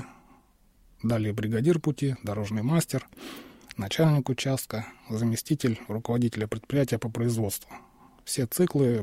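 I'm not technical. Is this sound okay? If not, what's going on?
Yes, the sound is technically fine, with no dropouts, distortion, glitches or other problems anywhere in the recording.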